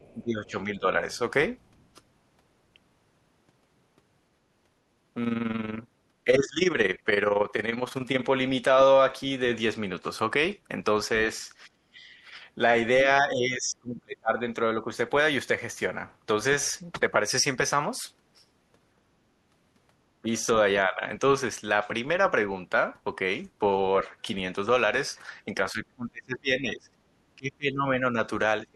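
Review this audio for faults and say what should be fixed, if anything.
Other side's voice leaking through at 0 to 0.14 s and 1.16 to 1.85 s. A faint second voice sits roughly 35 to 40 dB below the speech. An echo canceller likely left loudspeaker playback in the microphone signal. Better echo cancellation or a headset would prevent it.

Speech suppressed in double talk at 0.14 to 0.85 s, 6.25 to 6.61 s, 11.67 to 12.05 s, 13.23 to 14.91 s, 20.22 to 21.02 s, and 25.72 s to the end. The voice dips by about 10 to 30 dB. Likely cause: the canceller turned down both sides during overlap. Tuning its double-talk detection would prevent it.

Overlap-add ripple from 5.25 to 8.29 s. The level flutters about 11 dB at about 20 Hz. Frames were overlapped with windows that do not sum to a constant gain. Matching window shape to hop size would prevent it.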